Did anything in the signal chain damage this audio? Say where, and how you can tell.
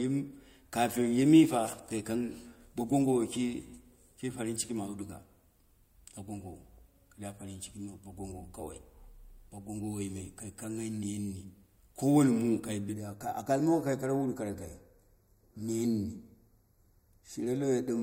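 Yes. From 12.94 s to the end the speech turns hollow and phasey: channel delay (comb filtering) from a mono fold-down with one channel late by about 0.15 ms. The spectrogram shows fixed dark horizontal notches, the first around 3 kHz.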